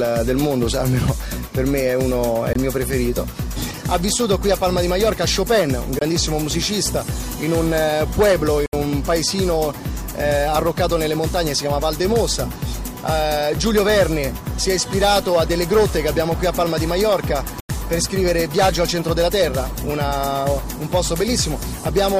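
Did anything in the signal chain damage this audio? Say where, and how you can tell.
Yes. The driver or buffer stage dropped blocks of digital silence, four times: 2.53 to 2.55 s, 5.99 to 6.01 s, 8.66 to 8.73 s and 17.60 to 17.69 s. The first two last 23 ms each, which fits a missed 1024-sample buffer. The others run 70 ms and 93 ms, about three and four buffers' worth. The output wasn't refilled in time, so the sound drops straight to silence and back with no fade. All four are long enough to be heard as short holes rather than ticks.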